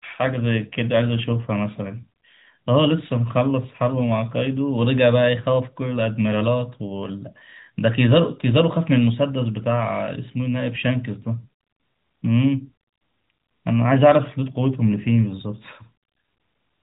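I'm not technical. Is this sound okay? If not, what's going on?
Yes, no faults here.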